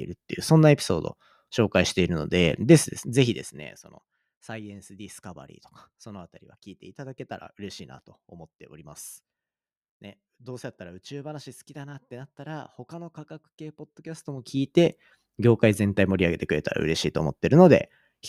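Zipper noise runs from 3.09 to 3.92 s as the level drops about 20 dB, then from 14.04 to 14.91 s as it rises again. Unsmoothed 2 dB steps, roughly ten a second, tick audibly.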